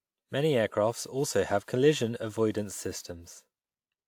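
Throughout the speech, the sound is swirly, smeared and hollow. Attacks blur, and nothing is heard above 19.2 kHz. The likely cause is generation loss. The audio was re-encoded about four times, and each pass added fresh noise. It fits a WMA chain at 128 kbit/s.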